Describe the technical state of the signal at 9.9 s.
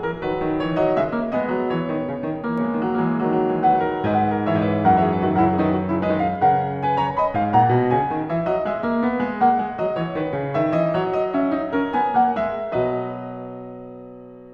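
At 9.9 s the music plays through intact, with no technical fault at that point.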